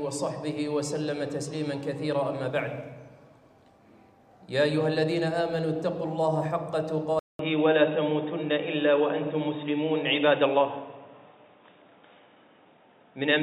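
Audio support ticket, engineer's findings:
Abrupt dulling 7.19 s to end: nothing above 3.8 kHz, 200 ms silence at switch, level shift of about 5 dB, new noise floor about 50 dB down. Likely input switched to a poorer device with narrower passband.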